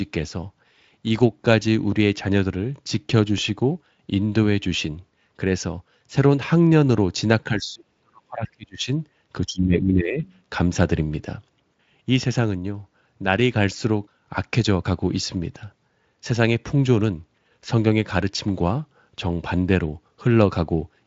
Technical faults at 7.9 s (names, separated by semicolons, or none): speech suppressed in double talk